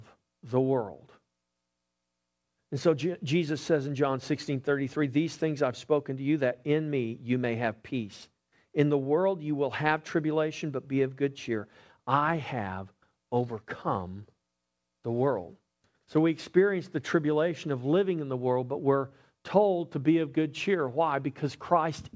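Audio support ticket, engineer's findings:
No faults found on review of the speech. Call path through the WebRTC link is working as expected: band-limited with nothing above 8 kHz, which fits G.722 wideband coding.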